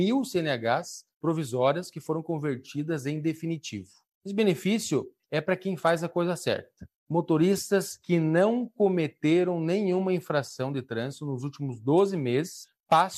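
No technical faults can be heard anywhere in the clip. There is nothing to place on the timeline, since no event in the audio stands out as a fault.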